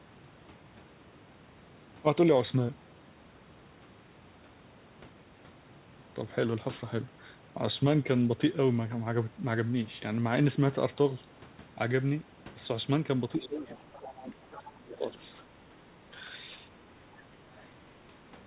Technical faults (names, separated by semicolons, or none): other side's voice leaking through; speech suppressed in double talk